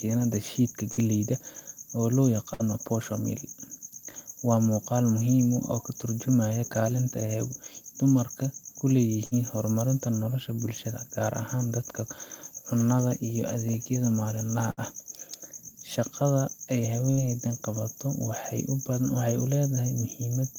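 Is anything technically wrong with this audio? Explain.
Yes. Bursts of packet loss occur at 0.91, 2.53, 9.25, 14.71 and 17.11 s, each lasting about 90 ms. The receiver extends and fades the last sound for about 60 ms, heard as a brief buzz or hiss, then resumes with about 60 ms of speech gone.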